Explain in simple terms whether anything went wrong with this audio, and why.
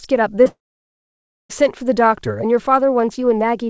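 Two things went wrong here, one right after the other.

At about 0.44 to 0.47 s there's a short concealed packet loss. A tiny slice of the call showed up too late, so the receiver stretched the sound just before it to cover the hole. It comes across as a quick smear.

Straight after that, from 0.47 to 1.51 s, the sound carries on briefly as a fading buzz. Then it goes quiet for nearly a second and picks up again with that whole stretch missing. That's likely a long network dropout, where nothing got through at all.

Throughout, the audio has that slightly dull phone-call quality, with nothing above 8 kHz, which comes from the G.722 call path.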